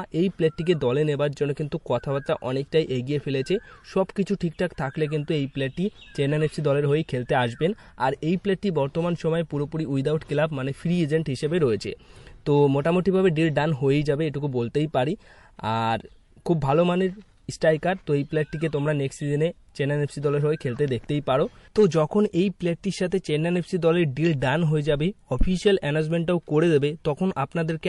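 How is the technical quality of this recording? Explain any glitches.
The recording has plainly audible compression damage throughout, plus three brief pre-echoes near the end.

Throughout, the sound is watery and swirly, likely MP3 compression at a low bitrate around 48 kbps. Unlike simple low-pass filtering, the damage flickers frame to frame.

At 21.89 to 21.91 s, 23.10 to 23.12 s and 24.40 s, pre-echo adds a hiss about 10 to 12 dB above the background just before sharp attacks, as coarse noise spreads across roughly 48 ms blocks. Unlike reverb, it comes before the attack, not after.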